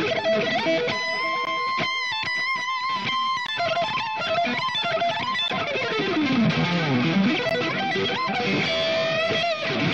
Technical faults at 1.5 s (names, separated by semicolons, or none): gap between stream segments